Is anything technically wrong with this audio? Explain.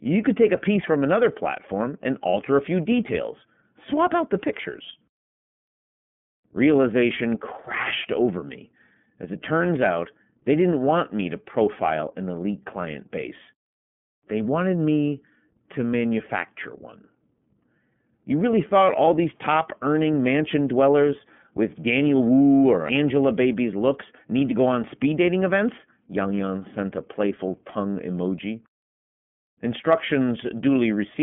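Yes. Throughout the speech there is iLBC codec damage. Nothing passes above 3.8 kHz, and the band sits near 150 Hz to 3.4 kHz. Coding each frame's excitation independently, as fits 30 ms frames near 13 kbps, adds a plainly rough, synthetic grain that plain telephone band-limiting alone would not.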